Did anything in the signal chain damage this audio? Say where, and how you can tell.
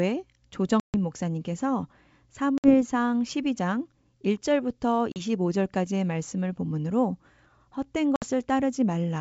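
Yes: packet loss on an ADPCM call, at the network stage. Silent holes appear at 0.80–0.95 s, 2.58–2.75 s, 5.12–5.21 s and 8.16–8.25 s, with about 140, 60, 40 and 60 ms lost, each a handful of packets. A waveform shows hard-edged flat gaps. A spectrogram shows blank vertical bands. After each gap the decoder's predictor and step size disagree with the sender's, so the speech resumes slightly distorted and settles within tens of milliseconds.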